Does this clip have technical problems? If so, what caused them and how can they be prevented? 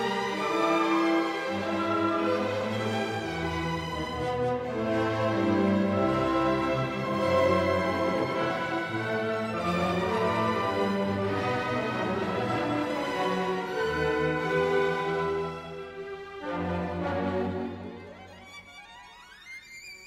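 Yes. Throughout the clip, every sound is followed by a second full-band copy trailing about a fifth of a second behind, a few decibels quieter and with no decay or room colour. This is a doubled audio track, likely from the same signal being captured twice through a slower path. To prevent it, route each source through only one capture path and mute any duplicate monitor or loopback feed.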